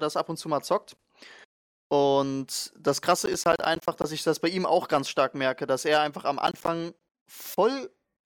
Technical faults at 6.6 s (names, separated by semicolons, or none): processor overload crackle